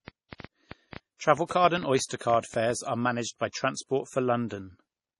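Right from the start the whole clip has that hollow, swirly low-bitrate MP3 character, and nothing at all comes through above 11.4 kHz. Yet it sits in a file at a fairly generous rate. That points to low-bitrate audio saved at a high bitrate, most likely an MP3 of around 32 kbit/s re-encoded at something near 190 kbit/s. The second pass just preserves the damage and the cut-off from the first.

From 0.08 s to 2.71 s there's a train of clicks running over the top, about twenty of them at roughly six or seven a second. The spacing is uneven, so it sounds like a stuttering tick rather than a steady one. The clicks all have much the same shape and peak around 10 dB above the sound itself, so they're hard to miss and carry on through the gaps. That's likely interference from nearby equipment or a faulty connection or power supply.

Mixed in with those, there are two bit error spikes. The first, at 1.50 s, is a single corrupted sample. 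The second, at 2.31 s, spans three samples in a row. Each one is a flipped bit that throws the sample value off by a power of two before it snaps back. You hear it as one sharp, broadband tick that has nothing to do with the sound around it.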